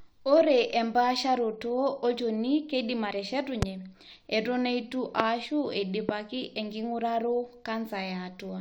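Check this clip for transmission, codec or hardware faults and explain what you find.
The speech contains two kinds of fault: three loud pops and one skip of compressed frames.

Loud pops occur at 3.62–3.65 s, 5.20–5.22 s and 6.09–6.11 s. Each is a single sharp thump, roughly 20, 25 and 15 dB above the speech. The likely cause is a voltage pulse from a switch, plug or static. The speech continues underneath each pop, so nothing is lost. That separates these from dropouts or skips.

Compressed frames are skipped at 5.45 s. The decoder never played about two frames, so the speech jumps ahead by roughly 50 ms, which fits a 23.2 ms frame length. The join is heard as a short blip or click where the speech jumps ahead.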